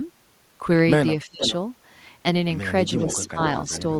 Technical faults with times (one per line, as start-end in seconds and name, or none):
1.25-1.42 speech suppressed in double talk
1.42-1.53 echo leak
2.87-3.30 echo leak
3.05-3.39 speech suppressed in double talk
3.73-3.82 echo leak